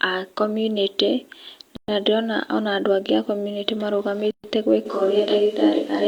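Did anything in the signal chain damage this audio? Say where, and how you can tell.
Yes, two things. First, gaps at joins of encoded pieces: the speech drops into silence from 1.76 to 1.88 s (about 118 ms) and again from 4.31 to 4.44 s (about 128 ms). Each has abrupt, slightly smeared edges, and the sound picks up exactly where it stopped. That's a codec or editing-stage problem. The segments were encoded separately and joined without trimming, so each encoder's start-up delay and last-frame padding stayed in as dead air.

Second, from 4.87 s to the end, the sound abruptly turns roomy and hollow, with thinner low end. The level barely moves, but there's a room-noise bed roughly 35 dB under the speech. That sounds like a switch to a distant microphone at the analogue or capture stage. The close mic's feed likely dropped out or wasn't used, leaving something farther away, like a camera mic, and the cut is instant rather than a crossfade.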